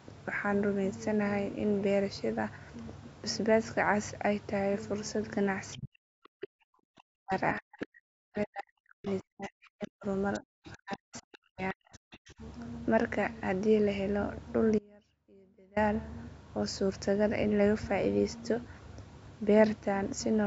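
Speech suppressed in double talk runs from 5.76 to 10.06 s, and again from 10.39 to 12.41 s. The talker's speech dips sharply, at worst by around 40 dB. The likely cause is an echo canceller that could not tell the talker apart from loudspeaker echo while both sides spoke, and so turned everything down.

The other side's voice leaking through appears in brief scraps at 7.81–7.86 s, 9.06–9.12 s and 11.33–11.38 s, and in longer stretches at 10.33–10.97 s and 11.93–12.33 s. It sits roughly 20 to 30 dB below the speech. The far end's audio, played from a loudspeaker, was likely not fully removed from the microphone.

An audio dropout to a faint residue cuts in from 14.79 to 15.76 s, losing almost a second. The speech stops abruptly, and only a faint trace remains, about 30 dB down, until it snaps back. The likely cause is a loss of the signal while the path after the break stayed live.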